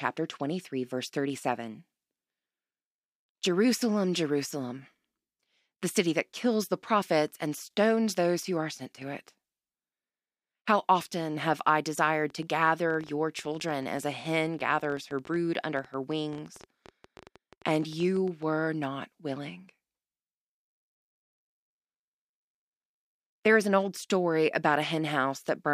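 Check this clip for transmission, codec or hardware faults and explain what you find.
One fault is present. From 12.30 to 18.44 s, a train of clicks ticks over the speech at about 11.3 per second. They are unevenly spaced, number some seventy, and peak near the speech's own level. These matching pulses are likely interference from nearby equipment or a faulty connection or power supply.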